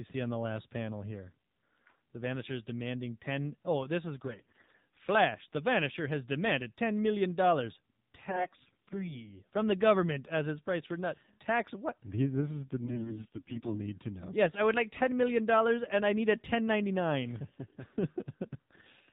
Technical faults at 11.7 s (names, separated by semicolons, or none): AMR narrowband mobile codec